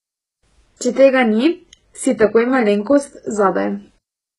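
The speech carries heavy HE-AAC compression damage throughout. Nothing sounds above 11 kHz. The treble is gritty, and s sounds turn metallic and lispy. The likely cause is rebuilt treble that fails to match the lower harmonics, which fits a bitrate near 12 kbps.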